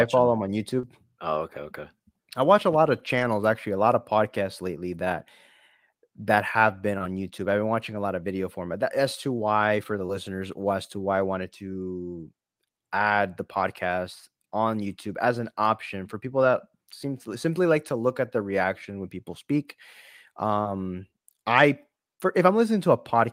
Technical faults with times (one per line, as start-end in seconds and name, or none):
0.79-0.85 short concealed packet loss
0.83-0.85 lost packet rebuilt from error correction
2.99-3.25 lost packet rebuilt from error correction
7.91-7.97 lost packet rebuilt from error correction
9.91-10.01 lost packet rebuilt from error correction
16.39-16.49 lost packet rebuilt from error correction
20.61-20.67 short concealed packet loss
20.65-20.67 lost packet rebuilt from error correction